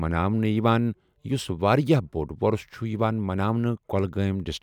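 No technical faults are audible.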